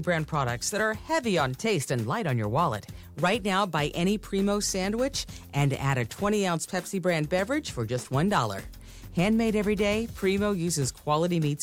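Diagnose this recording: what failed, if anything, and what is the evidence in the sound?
Nothing failed: no stage from capture through playback leaves any audible trace of a fault in the recording.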